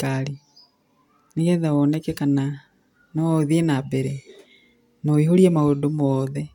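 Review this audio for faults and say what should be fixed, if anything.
Nothing needs fixing here; no faults can be heard.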